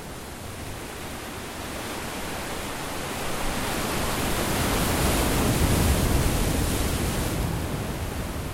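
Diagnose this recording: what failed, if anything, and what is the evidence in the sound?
From 7.22 s to 8.53 s the sound runs 5.87% fast and 98.8 cents sharp, with spectrogram harmonics stepping upward together. This is likely a buffer-stage drift correction step.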